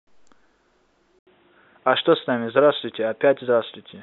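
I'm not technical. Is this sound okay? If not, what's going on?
No. At about 1.19 seconds the speech suddenly turns dull and boxy, as if heard through a cheap headset. There is a brief gap of about 0.08 seconds, then it comes back at a somewhat different level, with a faint new background noise, and stays that way to the end. Everything above about 3.8 kHz is gone, so the crisp top is missing. This is likely an input switched to a poorer device: the recording jumped to a lower-quality microphone partway through.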